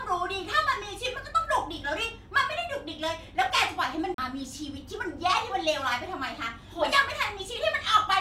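Speech recording with a CD skip from 4.14 to 4.18 s: the laser jumped tracks, so the player muted for roughly 40 ms and resumed from a different point.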